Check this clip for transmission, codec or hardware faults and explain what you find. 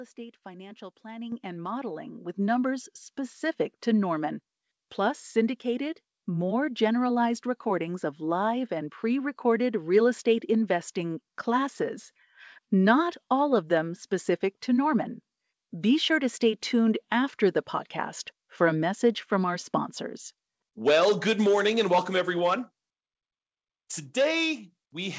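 Two sudden level jumps, both from the microphone volume being stepped up. The sound comes through a call path limited to 8 kHz.

At 1.32 s, just before "and modeling with numbers", voice and background both get louder at once by about 8 dB. At 2.34 s, between "and modeling with" and "numbers specific to", they jump again by about 5 dB. Each time, the call software judged the microphone too quiet and raised the device's input gain in a single step.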